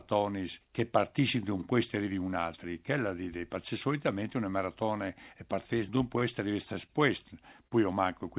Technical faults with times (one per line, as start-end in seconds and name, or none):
6.19-6.22 short stall from a late packet
6.86-6.91 short stall from a late packet
7.67-7.73 short concealed packet loss